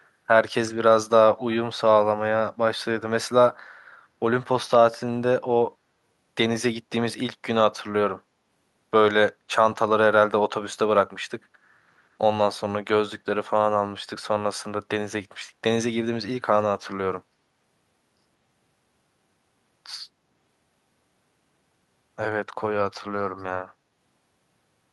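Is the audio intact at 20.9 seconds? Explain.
Yes, the audio is intact at 20.9 seconds: the speech there plays through with no audible technical fault.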